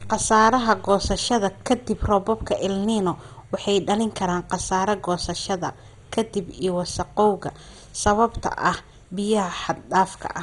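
From start to finish the speech carries heavy MP2 compression damage, with nothing above 11.2 kHz, and a sound that fits a rate around 56 kbps. It is likely a Layer II encoder starved of bits, switching upper sub-bands off and quantising the rest coarsely. Unlike a simple low-pass filter, the top end flickers in and out, leaving a dull, gurgling, granular texture rather than MP3-style swirling pre-echo.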